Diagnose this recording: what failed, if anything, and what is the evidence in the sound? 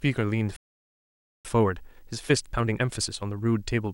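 Video or display buzz sits under the speech for the whole recording, a fault in the analogue wiring stage. The evidence is a steady buzz at 59.94 Hz, the NTSC-style field rate, with hash riding above it and a thin, very high tone at 15.7 kHz, the horizontal line rate. The level is roughly 40 dB below the speech. A display or video cable running near the audio path is coupling its scan signals into the line.

A playback stall cuts the speech off mid-flow at 0.56 s, and the output stays silent until 1.45 s, a gap of about 0.88 s. The sound then resumes where it stopped rather than jumping ahead, so nothing is lost, only delayed. This points to the playback stage. The likely cause is the player's buffer running dry, or its audio thread being blocked, leaving no samples to send to the output until it recovered.

Time-compressed catch-up follows the stall, from 1.45 s to the end of the recording. 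The speech runs at 1.25 times normal speed while its pitch stays unchanged. This is the playback stage again. To work off the backlog built up during the silence, the player removes short segments and cross-fades the joins. That shortens the timeline without resampling, and it is what produces the hurried delivery.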